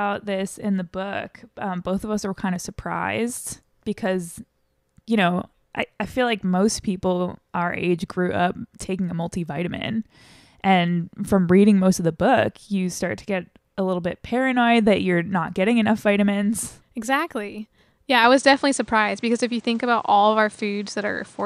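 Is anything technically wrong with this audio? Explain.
Yes. Input switched to a poorer device at 18.24 s, likely another microphone: content above 9.8 kHz vanishes, level shifts around 5 dB, and faint new background noise appears.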